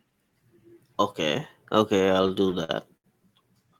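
From 1.97 to 3.06 s the speech drags and stutters, with ten brief holds where the last sound is stretched, the longest about 73 ms. These repeated stalls (stutter) mean packets arrived late, the jitter buffer kept emptying, and about 207 ms was filled in without losing anything.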